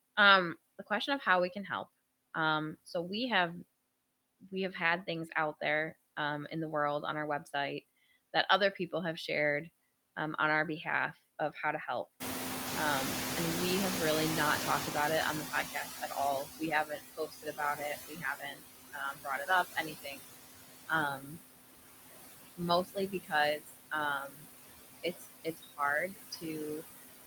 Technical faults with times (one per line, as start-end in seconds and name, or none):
0.00-27.27 noise suppressor artifacts
12.20-16.48 noise suppressor catching up
15.64-20.26 speech cut by the noise suppressor
20.88-21.39 speech cut by the noise suppressor
22.23-24.48 speech cut by the noise suppressor
25.03-26.46 speech cut by the noise suppressor